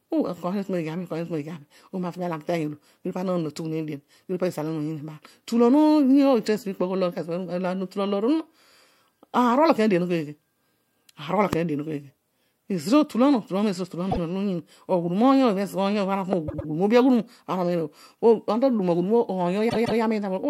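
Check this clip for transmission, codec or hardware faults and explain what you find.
Two kinds of fault are present: two loud pops and three stretches of repeated frames.

Loud pop, at 11.53 to 11.55 s and again at 16.33 to 16.35 s: a voltage pulse, likely from a switch, plug contact or driver glitch, enters the chain. Each is a single sharp pop around 15 dB above the speech, which continues underneath.

Repeated frames, at 14.10 to 14.18 s, 16.47 to 16.68 s and 19.69 to 20.00 s: the decoder receives the same compressed frames more than once and plays them again. The first block is 52.2 ms, repeated once, which fits two frames. The second is 104.5 ms, repeated twice. The third is 156.7 ms, repeated twice. Each is heard as a stutter, and the audio grows longer by about 52, 209 and 314 ms.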